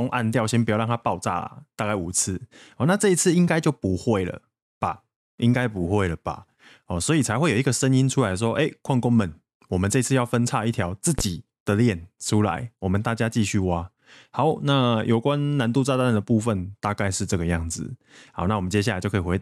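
A sudden voltage step or pulse, likely from a plug being moved, a switch, a static discharge or a driver glitch, gets added to the signal path at 11.19 to 11.22 s. The result is a single loud pop, peaking around 10 dB above the speech, heard as a sharp, brief thump laid on top of the talking. The following circuitry shapes that pulse into a short burst, while the speech continues underneath without a break.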